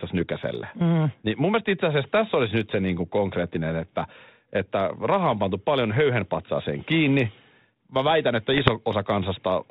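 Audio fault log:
8.52–8.71 s, bit errors on an ADPCM link: flipped bits derail the decoder's step size and predictor, giving ringing pops and rough level jumps rather than clean gaps.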